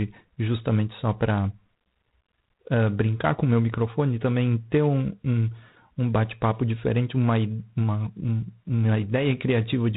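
A harsh, rasping hiss rides on the speech from start to finish, swelling and fading with its level, and nothing above 4 kHz comes through. That is G.726 ADPCM coding, whose coarse prediction-error steps point to the 24 kbit/s rate.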